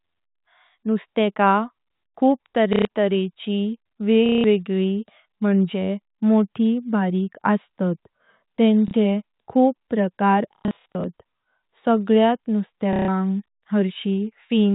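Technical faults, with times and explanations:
2.73–2.85 s, 4.26–4.44 s, 8.88–8.94 s, 10.56–11.04 s and 12.93–13.08 s: packet loss with last packet repeated. Gaps last 60 to 270 ms, ending before "वेगळी म्हणजे" and "खूप प्रकार". The 10.56 s stretch is scattered. Replayed chunks buzz near 33 Hz, which fits 30 ms packets.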